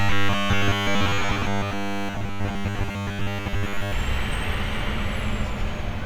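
From 0.01 to 3.92 s the sound takes on a rigid, metallic 100 Hz buzz: robotic sound from repeated short buffers, likely from audio arriving too seldom so that most of that stretch is filled by repeating about 10 ms chunks. Unlike dropouts, nothing goes silent.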